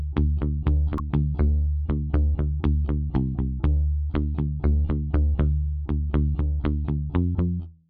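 At 0.96 to 1.00 s there is a brief burst of damaged data in a compressed stream, lasting about 40 ms. Some of the bytes in the coded stream at this point were lost or corrupted, so the decoder could not interpret those frames correctly. It lost its place in the stream and resynchronised at the next valid frame header. The result is a short, harsh blip or chirp.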